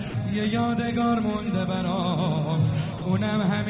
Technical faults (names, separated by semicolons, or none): sound dropped by the voice detector